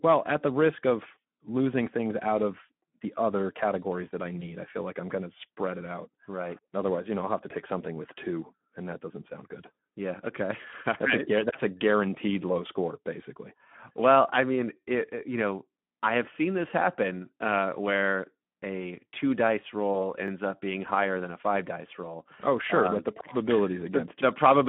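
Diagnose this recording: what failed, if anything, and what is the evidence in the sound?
Throughout, the speech sounds hoarse, grainy and band-limited to about 150 Hz to 3.4 kHz. This is plainly audible Speex codec damage at the codec stage, from narrowband coding at 11 kbps.

At 4.39 to 4.53 s, between "other categories that I" and "I feel like I'm", and at 19.93 to 19.96 s after "where a two dice", the sound is briefly stretched and fades. This is VoIP packet loss concealed by the speech codec: one 20 ms frame is missing each time, and the decoder extrapolated its last pitch and filter.

At 20.28 s, just before "up being higher than", a brief stutter-click occurs. This is a repeated buffer at the driver or buffer stage: a 20 ms block played twice, with essentially nothing dropped.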